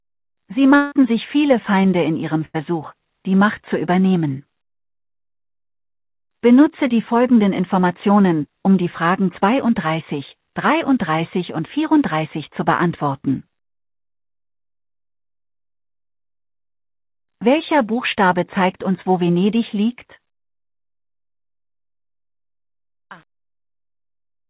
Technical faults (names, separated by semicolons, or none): long network dropout; burst of packet loss; truncation distortion on a fade